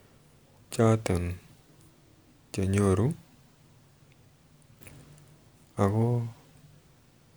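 No technical faults can be heard anywhere in the recording; the signal stays continuous and steady throughout.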